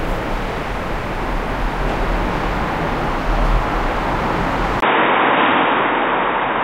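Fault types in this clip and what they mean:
Input switched to a poorer device, 4.80 s to the end: after a 20 ms gap, sound loses everything above 3.8 kHz and gains faint new background noise, likely a device change.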